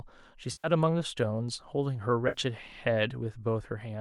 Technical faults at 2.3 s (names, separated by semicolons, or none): AAC frame loss with concealment